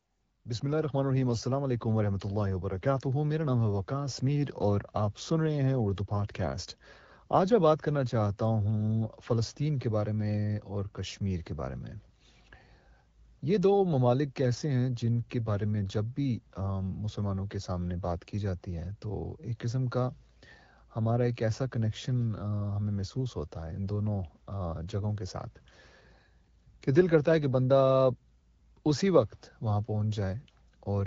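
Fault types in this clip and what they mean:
Nothing to flag here, just speech carried over an AMR wideband (HD Voice) link at 12.65 kbit/s.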